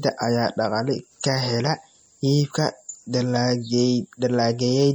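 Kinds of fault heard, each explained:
MP3 compression: The speech has a plainly audible watery, swirly texture throughout. Weak frequency components drop in and out between frames. This is likely MP3 coding, and the damage fits a low bitrate near 48 kbps. The band still reaches about 20.8 kHz.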